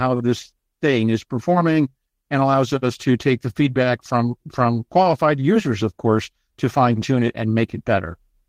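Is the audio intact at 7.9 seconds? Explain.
Yes, the audio at 7.9 seconds is intact, with no audible dropout, click, distortion or other fault at that point.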